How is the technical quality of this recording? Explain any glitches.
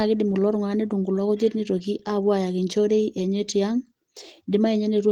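No glitches can be heard anywhere in this recording.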